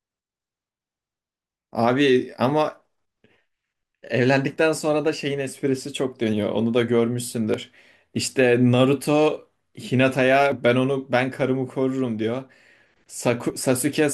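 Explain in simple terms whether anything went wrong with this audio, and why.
The speech jumps forward very slightly at 4.56, 7.54, 10.52 and 13.5 seconds, about every three seconds. This is audio missing between chunks: the recorder likely works in 3-second pieces and drops a tiny sliver at each changeover.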